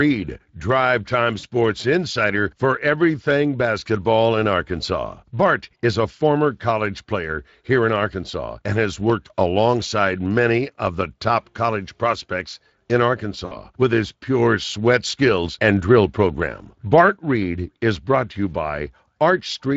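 Speex codec damage runs throughout the speech: a hoarse, noisy texture from a CELP coder short of excitation bits, consistent with roughly 20 kbps. VoIP packet loss concealed by the speech codec occurs at 1.39 to 1.45 s (40 ms) and 13.45 to 13.56 s (60 ms). The decoder stretches its last pitch and filter into a fading buzzy tone or coloured noise, and the speech stays thin afterward.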